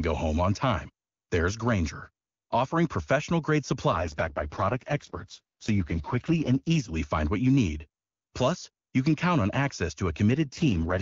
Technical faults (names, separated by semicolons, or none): AMR rate drop